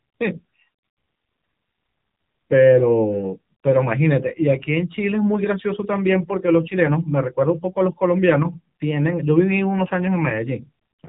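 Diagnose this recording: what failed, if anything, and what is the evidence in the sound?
AMR narrowband mobile codec damage runs through the whole recording, from the first second to the last, so the failure sits at the codec stage. Nothing reaches above about 3.8 kHz, and the speech has a plainly audible buzzy, synthetic edge. That buzz fits a low AMR-NB mode of about 7.4 kbps, where the vocal-tract model rebuilds each 5 ms from only a few pulses, and 8 kHz sampling removes everything above 4 kHz.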